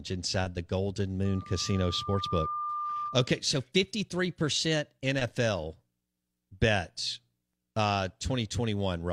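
It's a speech recording with two separate problems. Right after "inside the golden", at 1.25 s, a loudspeaker feedback squeal starts. A single tone at 1.2 kHz swells over roughly a second and hangs there until 3.40 s, sitting only a few dB under the speech. That's the mic picking up the speaker it feeds, with the loop gain tipping past one at that frequency, so the tone keeps reinforcing itself. Then from 3.52 s to 5.04 s everything runs 5.57% fast and about 94 cents sharp, close to a full semitone, before snapping back to normal. Speed and pitch move together, which sounds like a drift correction step. The likely cause is clock-matching software jumping the playback rate in one go to rebalance its buffer, rather than easing it gradually.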